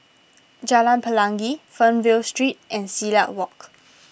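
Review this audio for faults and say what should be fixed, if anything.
Nothing to fix: no faults found in the speech.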